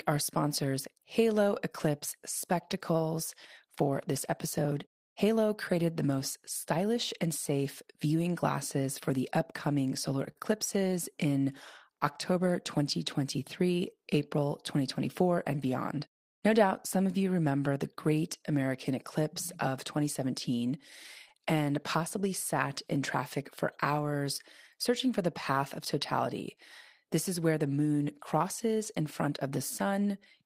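Speech, with two short stalls from a late packet: at 10.31 s right after "for the upcoming solar", and at 21.28 s just before "and possibly sat in". Each time the jitter buffer ran dry, so the last sound got held about 40 ms and 20 ms respectively, with nothing lost.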